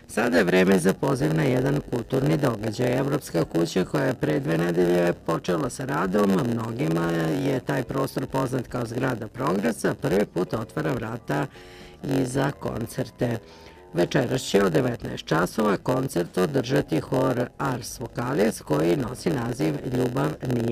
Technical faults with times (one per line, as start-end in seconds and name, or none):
0.00-20.71 block size mismatch (padded)